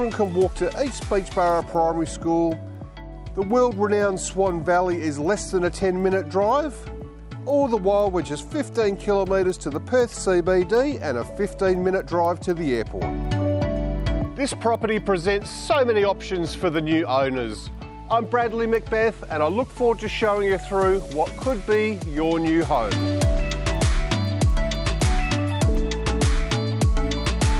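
Resampler restarted on every block, throughout: the conversion from 24 kHz to 48 kHz treated each 250 ms block separately, so each edge lacked true neighbouring samples. The small error at every boundary is heard as regular ticks at 4.0 Hz whenever sound is present.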